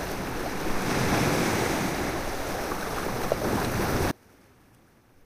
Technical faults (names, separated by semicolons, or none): one channel inverted